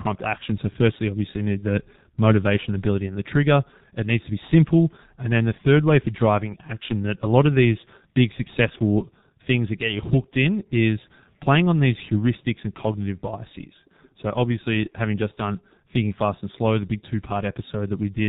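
G.723.1 codec damage runs throughout: the speech is squeezed through 30 ms frames at a very low rate, consistent with the 6.3 kbit/s mode. Nothing above 4 kHz survives, and the slowly updated voice model leaves a heavily muffled, hoarse sound with smeared consonants.

VoIP packet loss concealed by the speech codec occurs from 1.58 to 1.64 s, between "firstly obviously you" and "the motivation ability and". The gap fits a single lost 30 ms frame that the decoder filled by extending its last pitch and filter at falling gain, giving a brief fading smear before the voice recovers.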